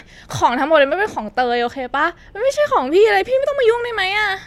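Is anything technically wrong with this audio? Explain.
No, nothing technically wrong here.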